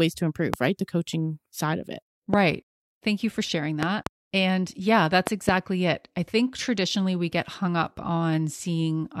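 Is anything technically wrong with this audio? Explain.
Yes. The speech is interrupted by loud pops. Single pops occur at 0.54 to 0.56 s and 2.34 to 2.36 s. Double pops occur from 3.83 to 4.09 s and from 5.27 to 5.51 s. Each peaks roughly 20 dB above the speech. The likely cause is a sudden voltage pulse from a plug, switch, static or driver glitch. Later circuits shape that pulse into a sharp thump. The speech carries on beneath each pop.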